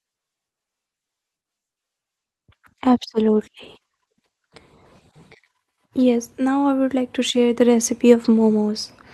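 At 2.18 s the call's bandwidth estimate falls and the encoder is pushed to a much lower bitrate, a call bitrate drop that lasts until 5.65 s. The coarser coding fits a fall from 32 kbps to 15 kbps, held at its lowest for about 3.4 s. In that span the speech loses its upper frequencies and turns muffled, with a rough, watery texture, before the fuller sound returns as the bitrate recovers.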